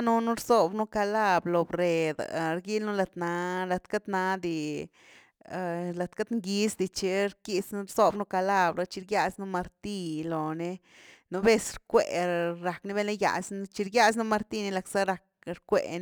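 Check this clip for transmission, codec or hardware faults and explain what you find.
There's one hardware fault here, sample clock jitter, running the whole way through. The converter's clock wobbles by a few microseconds, so samples land slightly off time. Steep waveform slopes turn that into error around 35 dB down: a faint hiss that roughens loud, bright speech and disappears in pauses.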